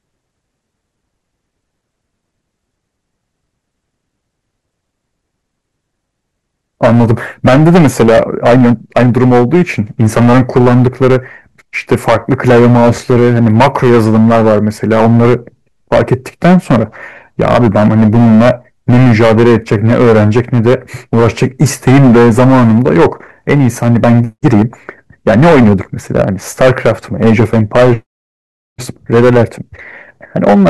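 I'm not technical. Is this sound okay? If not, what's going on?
No. The speech is affected by hard clipping from start to finish. The recording was pushed far louder than the equipment could handle, so the tops of the loudest moments were sliced off flat; roughly a tenth of the sound is cut this way. That flattening adds a harsh, fizzy edge to every strong syllable. Unlike background hiss, which stays steady, this roughness comes and goes with loudness, biting hardest on emphasis and vanishing in quiet passages.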